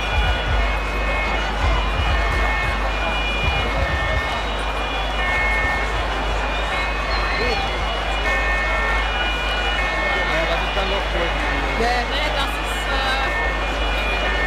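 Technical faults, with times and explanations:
Throughout, mains hum: a steady, low drone sits under the whole sound, very loud, only about 5 dB below the wanted signal. Its pitch is fixed at 50 Hz, the frequency of the power line, with low harmonics stacked above it. That points to the supply coupling into the signal path, through a ground loop between connected equipment or stray field from a nearby transformer.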